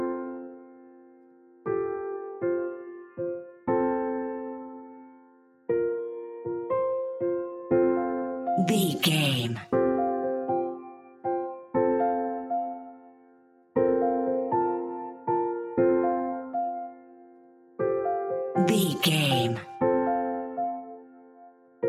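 A noise suppressor applied to music or sounds stays active across the whole clip. Tuned for speech, it treats sustained tones and reverberant tails as noise, so the level swings by around 10 dB. Unlike a compressor's pumping, which follows loudness, this follows steadiness.

Sound cut by the noise suppressor occurs at 0.31–1.67 s, 2.87–3.67 s, 4.86–5.69 s, 10.78–11.74 s, 12.85–13.76 s, 16.89–17.79 s and 20.86–21.83 s, each dipping by about 11–12 dB. Onsets survive while held material sinks. A dropout would silence everything abruptly instead.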